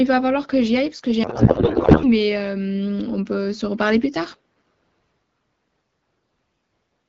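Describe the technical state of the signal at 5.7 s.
At 5.7 s the speech is intact, with only the light band-limited character of AMR wideband (HD Voice) coding and no fault at that moment.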